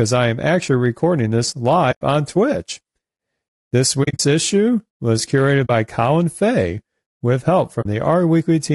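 Speech runs the full clip with a rough, grainy texture: harmonics sound smeared, noise fills the gaps between them, and the top band sounds thin and synthetic. This is low-delay AAC compression, likely AAC-ELD at a low rate fitting about 32 kbps, where short frames can't resolve pitch harmonics finely. On a spectrogram the harmonic stripes look blurred and speckled, with noisy fill between them and a patchy upper band. Separately, AAC frame loss with muting punches soft-edged holes into the sound. The first runs from 1.91 to 2.02 s. The second is a cluster of short dropouts scattered across 4.03 to 4.2 s, the longest around 40 ms, just before "issue was curated". The third falls right after that phrase, at 5.65 to 5.70 s. The fourth follows "with help" at 7.81 to 7.86 s. In each, the decoder zeroes the missing spectrum and the overlapping windows fade the sound out and back in. The waveform shows the envelope tapering to silence and recovering, and the spectrogram shows a clean vertical blank band.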